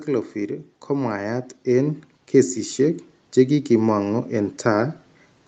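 A speech recording whose level swells steadily from 0.33 s to 5.02 s, voice and background rising together by about 10 dB. This is automatic gain rising: the call's gain control judged the input too quiet and kept turning it up, on audio already band-limited at 8 kHz.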